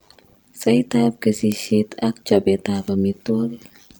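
Overlap-add ripple runs through the whole of the speech. The audio was split into windowed frames and rejoined with an overlap that does not add up to a steady gain, so the level swells and dips once every frame, by about 11 dB. Because that pattern repeats at around 100 times a second, it comes across as a metallic buzz with extra tones around the voice, laid over everything.

A bit error spike lands at 1.52 s, and another at 2.88 s. In each case a flipped bit pushed a tiny run of consecutive samples, apparently just a few, to a value off by a power of two before the signal snapped back. Each one is heard as a single sharp tick spread across the whole spectrum. The tick has no link to the speech around it.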